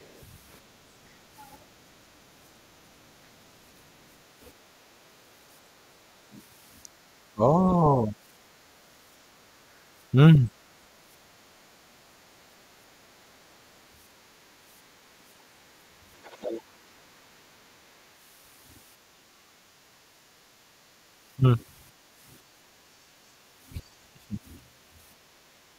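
A speech recording with echo-canceller faults. At 0.11 to 0.22 s and again at 16.23 to 16.62 s, traces of the other side's voice leak through, very quiet at first and far more audible the second time, likely residual loudspeaker echo the canceller missed; a spectrogram shows a second harmonic pattern under or beside the talker's. Speech is suppressed in double talk at 7.34 to 7.67, 8.05 to 8.14, 21.36 to 21.43 and 23.82 to 24.36 s, with dips ranging from slight to around 30 dB at the last; the waveform envelope pinches abruptly, likely the canceller ducking both voices together. At 19.47 to 19.66 s the background is gated by the echo canceller, the room sound dropping about 9 dB, seen as a brief notch in the noise floor.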